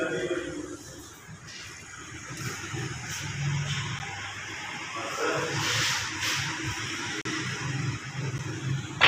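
Three blocks of digital silence show up. The first, at 3.99 s, drops out for about 10.7 ms, which fits a 512-sample buffer the program didn't fill in time, so you get a sharp tick. At 7.21 to 7.25 s a longer 39 ms hole opens, heard as a brief gap. At 8.38 s there's another 10.7 ms drop, again a tick.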